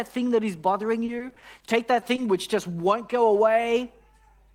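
From 1.05 to 2.20 s the speech turns choppy with pieces missing: repeated packet loss, each gap up to 30 ms patched by extending the preceding sound.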